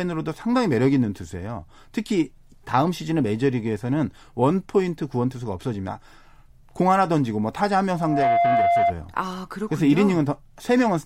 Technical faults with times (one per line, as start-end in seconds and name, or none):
7.97-8.94 loudspeaker feedback squeal